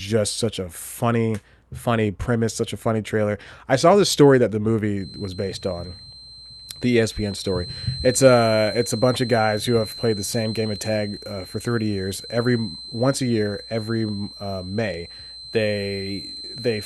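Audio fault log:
4.93–16.86 s, feedback whistle: after "the story that the", a thin 4.1 kHz tone wavers faintly beneath the speech, likely from a loudspeaker-to-microphone loop held just short of runaway feedback.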